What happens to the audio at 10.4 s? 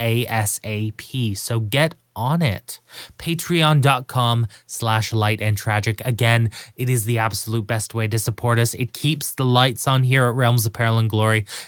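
Nothing goes wrong at 10.4 s; the speech there plays through intact, with no dropout, click, distortion or other audible fault.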